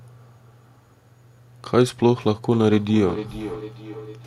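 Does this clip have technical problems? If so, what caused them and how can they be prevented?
Yes. Feedback echo between two devices runs from 2.52 s to the end. The speech comes back roughly every 400 ms, at most about 11 dB below the original. A second device in the room replays the call into this microphone. Its echo canceller cannot remove that. Keep one device per room joined, or use headphones.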